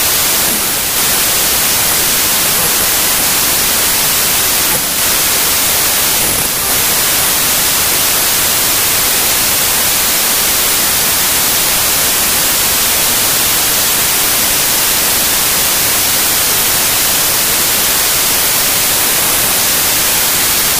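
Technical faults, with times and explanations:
throughout — wrong sample width: what you're hearing is 32-bit integer audio being read back as packed 24-bit, so every three-byte chunk straddles the real sample boundaries. Most values get stitched together from mismatched bytes, and only some land on the true top bits. That's why there's loud noise with the actual sound buried underneath. Since each real four-byte sample turns into four-thirds of a sample, everything plays at 0.75 speed, with pitch dropped by the same ratio.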